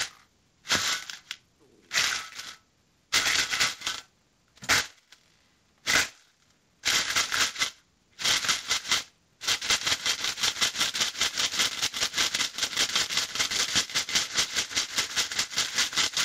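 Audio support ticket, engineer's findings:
Gain pumping, throughout: quieter sounds and the background in the gaps swell up, then duck under each loud sound, a swing of about 15 dB. Level spread squashed. Likely cause: input gain set far too high, with a fast limiter or compressor pulling it back on every peak.

Buffer tearing, throughout: robotic buzz at 375 Hz, present only while sound is playing. Points to a 128-sample playback ring buffer where the writer and reader have slipped and now cross inside every period. A small slice of each buffer replays audio from a few milliseconds earlier, with hard joins on both sides.

Call-path codec noise and bandwidth are consistent with a wideband call codec, and this path is not a fault.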